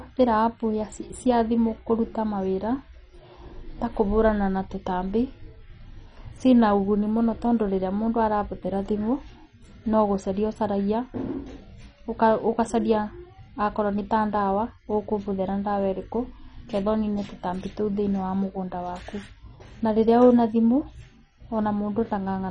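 Throughout the speech, heavy MP2 compression is likely at work, consistent with a bitrate near 32 kbps: starved sub-bands drop out, leaving dull, gurgling, granular speech. A spectrogram shows nothing above 10.3 kHz and upper bands flickering on and off as patchy blocks.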